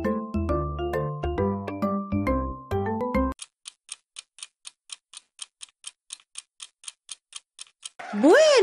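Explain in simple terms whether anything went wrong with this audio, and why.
At 3.01 s a tiny skip marks an overlap between stream segments: a sliver was trimmed away, so the sound jumps ahead instead of going silent.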